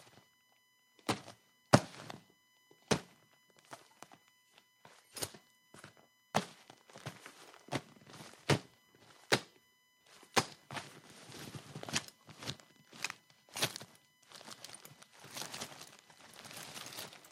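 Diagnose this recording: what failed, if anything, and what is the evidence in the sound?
USB whine runs through the whole recording, entering at the analogue wiring stage through shared power or ground. The 1 ms USB frame current leaks in as a fixed 1 kHz tone, strongest at 2 kHz, roughly 30 dB below the sound. On a spectrogram it appears as steady horizontal lines at 1 kHz and 2 kHz from start to finish.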